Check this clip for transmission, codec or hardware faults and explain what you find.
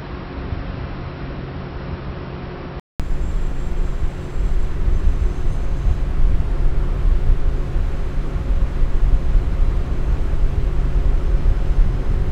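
One fault, at the start. From 0 to 3.0 s the sound is dull and about 10 dB quieter, nothing above 5.6 kHz, with faint extra noise. A 200 ms gap follows as it clears, likely an input switched to a poorer device.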